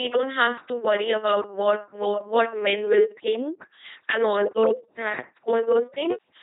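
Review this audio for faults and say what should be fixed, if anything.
Throughout the clip, the speech has gone through an LPC-10 vocoder. It rebuilds each moment from a small all-pole vocal tract filter driven either by a pulse train or by noise, never a blend. The result is a heavily buzzing, mechanical robot voice, with nothing above 3.8 kHz, consistent with a 2.4 kbit/s channel. Routing the audio through a higher-rate waveform codec such as Opus, rather than a parametric vocoder, would prevent this.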